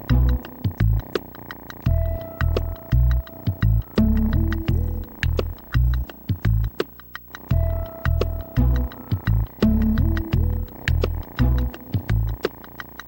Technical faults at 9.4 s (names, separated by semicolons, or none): video or display buzz